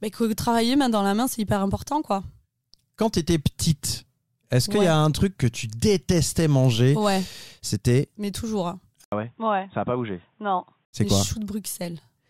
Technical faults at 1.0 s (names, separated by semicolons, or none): none